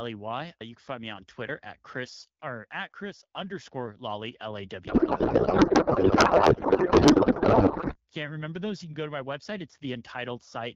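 From 4.87 to 7.97 s, a codec payload misread: the decoder unpacks AMR frames with the bit fields in the wrong places, which fits octet-aligned payloads read as bandwidth-efficient. The speech becomes garbled noise and warble that barely follows it, until "can't remember those you" returns over the AMR-WB stream.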